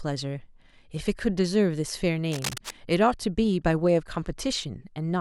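From 2.32 to 2.71 s, a burst of cable scratch noise runs over the speech for about 0.4 s, roughly 10 dB below it. It sounds like a dense, uneven rustle rather than a single click, and the speech continues underneath without any gap, so it isn't a dropout. The likely cause is a worn cable or connector being moved, its contact resistance fluttering quickly enough to pile many small crackles into one scratchy stretch.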